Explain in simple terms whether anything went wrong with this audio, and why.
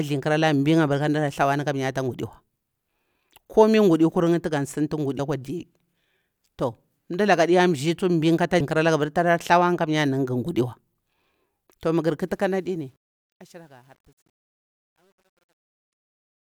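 Damaged data in a compressed stream causes two brief glitches, at 5.18 s, just before "akwa di", and at 8.6 s. Part of the compressed file was corrupted there, so the player misread those tiny chunks, lost its place, and jumped ahead to the next readable piece.

Truncation distortion on a fade starts at 12.28 s, after "mah gari", as the speech fades out. The volume was lowered using too few steps, which fits about 10-bit precision, so the quiet tail turns gritty from 13.23 s to the end.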